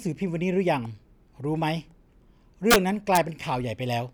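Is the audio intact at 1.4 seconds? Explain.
Yes, the audio is intact at 1.4 s, with no dropout, click, distortion or other fault at that moment.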